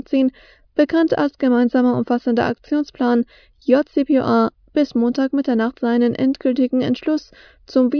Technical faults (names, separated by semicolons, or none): none